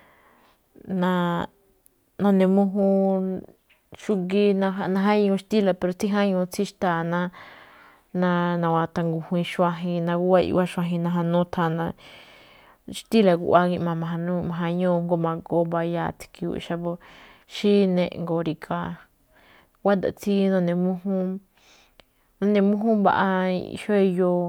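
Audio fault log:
Nothing in this speech clip stands out as a fault, so there's nothing to log here.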